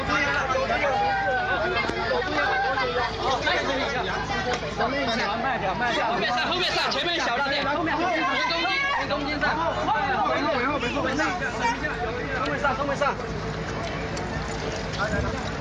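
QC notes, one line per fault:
2.46 s and 12.82 s: dropped buffer (overrun), a small forward jump, about 5 ms missing each time, likely from samples being overwritten before they were read.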